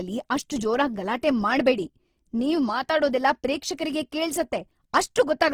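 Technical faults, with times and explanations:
Throughout, Opus compression, likely at a low bitrate around 16 kbps in its music mode: bands kept alive by folding or noise fill leave the speech rough and grainy rather than swirly, while content still reaches about 20.4 kHz.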